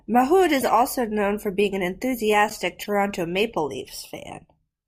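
Flipped bits in compressed frames reached the decoder, which played them anyway: a corrupt frame decoded, twice. Misread gains and codes put energy at the wrong frequencies for the length of the damaged frames. From 0.58 to 0.65 s, just before "also known for being", a handful of frames produce a fairly loud chirping burst. From 2.82 to 2.87 s, right after "for being an enthusiastic", a few more give a shorter, quieter blip.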